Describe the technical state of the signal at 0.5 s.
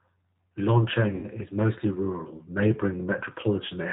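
G.729 codec damage is present at 0.5 s and across the whole clip. The speech is rebuilt from a vocal tract filter, a pitch predictor and a few pulses per frame, consistent with an 8 kbit/s stream. Nothing above 4 kHz survives, leaving the speech plainly rough and synthetic.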